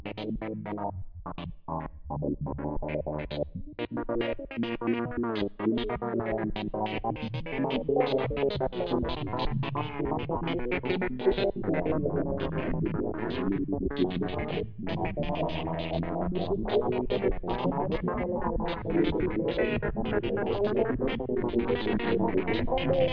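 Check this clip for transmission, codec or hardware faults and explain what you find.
No transmission, codec or hardware faults turn up anywhere in the clip. Nothing in the audio calls for further comment on those grounds.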